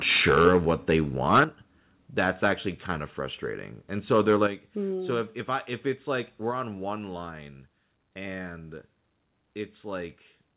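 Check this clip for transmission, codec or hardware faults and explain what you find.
Yes, two hardware-side faults recur through the speech, heard over a narrowband call path that carries nothing above 4 kHz.

Microphone overload occurs at 0.09–0.57 s, 0.89–0.96 s, 1.32–1.44 s, and 4.13–4.44 s, after "kind of frustrating and" and before "mm so if if". Peaks are driven about 3 to 8 dB past the converter's ceiling and flattened, likely from excessive input gain. Unlike codec noise, the harsh crackle rides only the loudest moments.

Microphone volume stepped down at 0.45 s (about −4 dB), 1.44 s (about −7 dB), 4.47 s (about −7 dB, just before "mm so if if"), and 6.51 s (about −3 dB, between "if it's like we're" and "on one line and"). Voice and background drop together, instantly, and stay lower, unlike a compressor's pumping recovery.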